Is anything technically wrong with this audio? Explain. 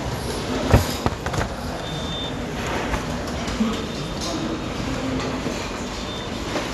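Yes. Throughout, the audio has audible MP2 compression damage, likely from a low-rate encode around 80 kbps. Nothing remains above 12.2 kHz, and the upper sub-bands flicker on and off as bits run short, giving a dull, gurgling graininess that a plain low-pass filter would not produce.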